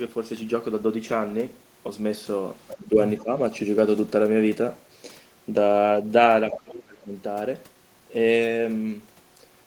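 Brief scraps of the other side's voice leaking through appear at 2.68 to 2.74 s, 3.18 to 3.23 s and 6.51 to 6.6 s, likely residual loudspeaker echo the canceller missed; they show as bands beneath the speech harmonics. Speech suppressed in double talk follows at 2.77 to 3.0 s and 3.19 to 3.34 s, where the level dips roughly 10 dB, and at 6.63 to 7.13 s, where it sinks far deeper, roughly 30 dB. These are likely the canceller turning down both voices during overlap, and they appear as waveform notches.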